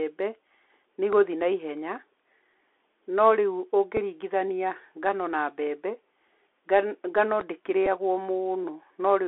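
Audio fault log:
Throughout: Bluetooth CVSD headset codec. The speech is confined to a telephone band of roughly 300 Hz to 3.5 kHz, consistent with 64 kbps CVSD, where each sample is a single up-or-down bit with an adapting step. The damage is plainly audible: loud, bright sounds outrun the step and smear, sibilants turn scratchy, and a granular hiss sits beneath everything. On a spectrogram, energy stops abruptly near 3.5 kHz and a noise floor fills the gaps between syllables.
1.13–1.15 s and 7.41–7.43 s: loud pop. Each is a single sharp click lasting about 22 ms and peaking about 10 dB above the speech, while the speech continues underneath. The likely cause is a voltage step or pulse from a switch, connector or static discharge, which the following circuitry shapes. On the waveform each pop appears as a tall isolated spike towering over the surrounding speech. On the spectrogram it shows as a thin vertical stripe spanning the whole band.
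3.97 s and 7.86–7.87 s: Bluetooth headset packet repeated. At 3.97 s about 3.8 ms of audio was lost, consistent with one voice packet, and the decoder replayed the previous packet's bits, giving a small tick. At 7.86 s the gap is 7.5 ms, fitting two packets. On the waveform, a short stretch is decoded from the preceding packet's bits again. On the spectrogram, a narrow discontinuity appears.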